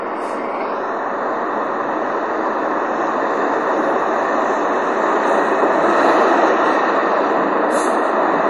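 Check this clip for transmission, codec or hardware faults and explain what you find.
One fault runs through the whole clip: heavy MP3 compression, most likely from a low-bitrate encode. The damage is plainly audible from start to finish. Nothing is present above 11.3 kHz, so the treble has been sliced off. Weak frequency components drop in and out between frames, giving a watery, swirling texture, and sharp attacks smear. On a spectrogram, energy stops at a flat ceiling near 11.3 kHz, with speckled gaps below. The degree of damage fits a bitrate around 48 kbps.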